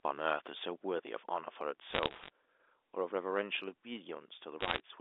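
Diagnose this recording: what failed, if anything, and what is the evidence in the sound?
Bit errors on a digital phone line, network stage: crackle at 1.90–2.30 s and 4.60–4.80 s, where roughly one percent of bits flip, turning samples into ticks.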